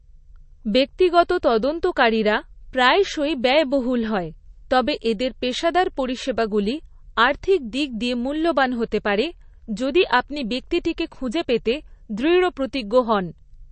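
A low-bitrate encoder, likely MP3 compression at a rate that fits roughly 35 kbps, runs short of bits across the whole recording, so it cuts everything above 8.3 kHz and drops weak frequency lines frame to frame, leaving the speech dull, watery and swirling, with metallic chirps on s sounds and smeared attacks.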